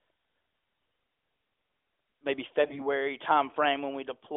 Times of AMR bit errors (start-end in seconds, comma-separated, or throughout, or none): 0.74-0.94, 2.62-2.88